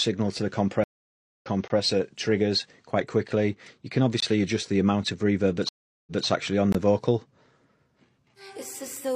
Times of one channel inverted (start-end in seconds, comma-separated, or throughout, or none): none